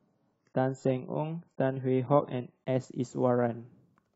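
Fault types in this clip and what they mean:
Adaptive stream starting at a low bitrate: the player began on a low-bitrate version of the stream so it could start quickly, then switched to a better version once it had gauged the connection. From the start to 2.66 s the speech sounds dull and smeared, with thin or artificial-sounding treble and stronger codec artefacts, which fits a stream around 16 kbit/s. At 2.66 s clarity jumps abruptly, with no gap, which suggests a step up to around 96 kbit/s.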